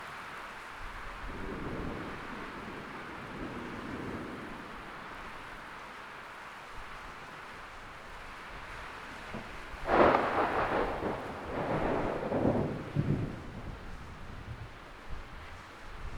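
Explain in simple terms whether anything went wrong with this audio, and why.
Throughout the clip, a wrong sample rate makes every sound 1.5 times faster and seven semitones higher at once. A simple pitch shift would leave the timing unchanged.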